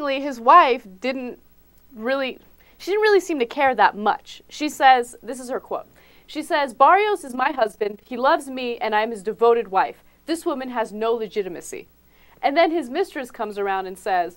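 From 7.28 to 8.14 s there is overlap-add ripple. The sound was split into windowed frames and rebuilt with an overlap whose windows don't sum to a steady gain, so the level dips at each frame boundary, by about 11 dB, around 30 times a second. It comes across as a rough tremolo. On a waveform the envelope looks scalloped at that rate; a spectrogram shows evenly spaced vertical bands of reduced energy across all frequencies.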